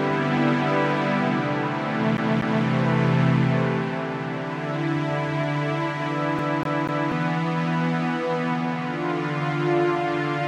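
From 2.17 to 2.66 s, then 6.39 to 7.12 s, the CD is stuck on one turn. A scratch keeps knocking the laser back a track, so the same 0.24 s slice repeats two and three times, with a tiny mute at each jump. That fixed, even period sets it apart from random dropouts.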